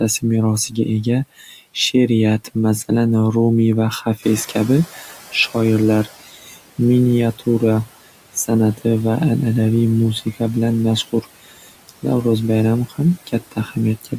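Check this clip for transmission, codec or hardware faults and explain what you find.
The faults heard are from noise-suppression processing in the speech path, three kinds in all.

Noise suppressor artifacts run throughout. The suppressor pulls down bands it judges to be steady noise, frame by frame, by about 16 dB. The background drops in the gaps and swells under speech.

Speech cut by the noise suppressor occurs at 0.21–1.75 s, 4.05–6.79 s (starting just after "rumiy va"), 11.07–12.04 s and 12.89–14.13 s. The suppressor misread quiet speech as noise and attenuated it by about 12 to 15 dB at its deepest, a few hundred milliseconds per stretch. Soft consonants and word endings sound swallowed.

Noise suppressor catching up runs from 4.22 to 6.15 s, right after "rumiy va", where the room noise jumps by about 10 dB near 4 s. The noise estimate lags, so the louder background passes with less reduction at first, then sinks over about 1.9 s to roughly 13 dB of cut.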